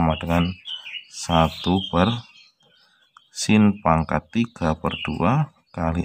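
Listening through the clip, nothing stood out as a technical fault at any point.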